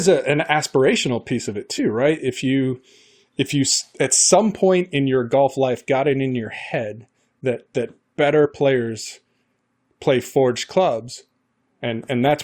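At 1.78 s, just after "aspirational piece of it", the speech jumps forward by roughly 20 ms. This is a case of compressed frames skipped: at least one coded frame never reached the output, either absent from the stream or rejected by the decoder as corrupt, so playback resumes a frame's worth later.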